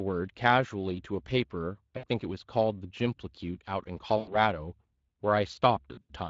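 Throughout, the speech has a hoarse, grainy edge, with a noisy texture on the voice that is plainly audible. This is Speex codec damage. The CELP encoder has too few bits to model the excitation cleanly, so the voicing comes out roughened. The amount of damage fits a mid-rate Speex mode of around 20 kbps.

From 1.97 to 2.05 s the voice smears into a short, stretched sound that fades. At 4.17 to 4.38 s a longer stretch does the same and fades further before the speech recovers. Between 5.93 and 6.13 s there are several brief dropouts of this kind, with the longest continuous one about 80 ms. These are VoIP packet loss concealed by the speech codec. Audio went missing for about 60 ms, 100 ms and 120 ms in total, and the decoder filled each gap by extending its last pitch and filter at falling gain. The sound stays weak for a moment after real packets resume.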